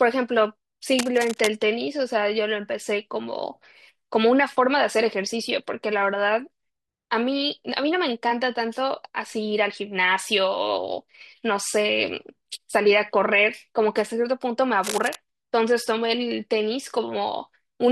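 Speech with two bursts of cable scratch noise, from 0.97 to 1.53 s and from 14.83 to 15.16 s. Each is a dense, ragged rustle sitting roughly 10 dB under the speech, most likely from a worn cable or connector being moved so its contact resistance flickers. Unlike isolated clicks or vinyl-style crackle, the disturbance is a continuous, irregular scratching that lasts as long as the movement, not separate sharp impulses.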